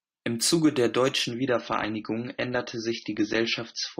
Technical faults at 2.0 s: adaptive stream at a lower bitrate

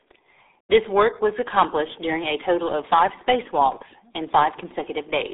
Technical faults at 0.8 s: RealAudio 14.4 codec

